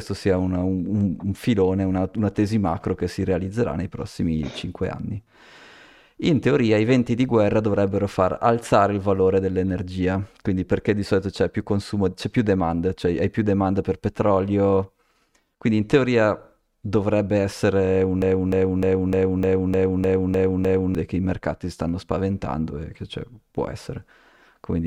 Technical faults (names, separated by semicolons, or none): broken-record loop